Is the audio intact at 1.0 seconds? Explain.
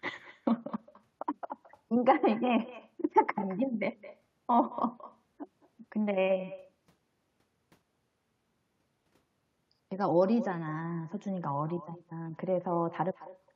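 No, echo with no canceller runs throughout, including at 1.0 seconds: the far end's loudspeaker feeds its microphone, returning a thin copy about 18 dB down, roughly a fifth of a second late.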